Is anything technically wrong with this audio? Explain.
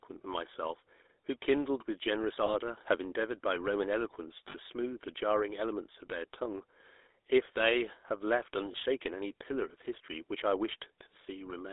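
Yes. Throughout, the speech runs through the GSM full-rate codec. It rebuilds the vocal tract from a model driven by sparse, regularly spaced pulses, at a rate consistent with about 13 kbps, within a 300 Hz to 3.7 kHz band. The result is a plainly audible buzzy, gravelly roughness and a thin, muffled top.

Lost GSM frames occur at 2.46–2.55 s, 4.48–4.56 s and 8.72–8.99 s. The decoder fills each gap by repeating the settings of the last good frame, which fits single 20 ms losses at the first and last and about 60 ms at 4.48 s. Each gap becomes a brief rough, metallic ring in place of the speech.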